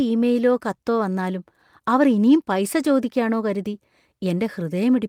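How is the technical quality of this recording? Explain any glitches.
No technical faults can be heard in the recording, so there are no glitches to explain.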